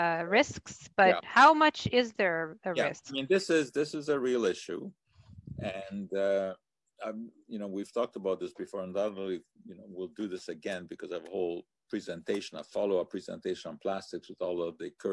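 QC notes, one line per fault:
No audible faults found anywhere in this audio.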